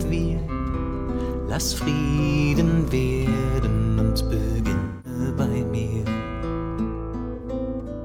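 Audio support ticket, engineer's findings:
AAC frame loss with concealment, three events. Smeared, phasey patches at 0.39–0.51 s and 7.35–7.46 s (about 85 ms, consistent with two lost frames). Longer concealed stretch at 4.79–5.19 s (256 ms). Decoder extrapolating last good spectrum across the gaps.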